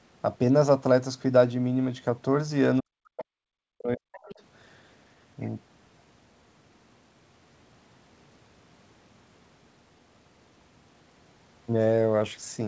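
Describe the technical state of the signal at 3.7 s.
At 3.7 s the speech sits inside a stretch of speech suppressed in double talk, running from 2.80 to 4.39 s. The waveform collapses in broken chunks, dropping by as much as around 40 dB, and the spectrogram shows the harmonics fading and thinning, likely because the echo canceller mistook the talker for loudspeaker echo while both sides spoke.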